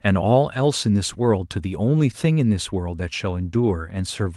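No technical faults are audible.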